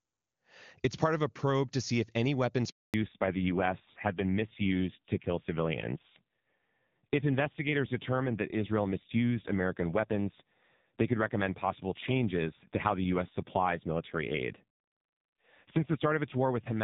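At 2.70 s a handover gap opens: the call switches networks and no speech frames arrive, so the voice cuts out abruptly and stays silent for 240 ms until 2.94 s. From 2.94 s to the end, a fallback to narrowband follows the clearer HD Voice opening. The call drops to an older low-rate codec, probably around 5.9 kbit/s AMR-NB, so everything above 4 kHz disappears and the speech turns dull and rough.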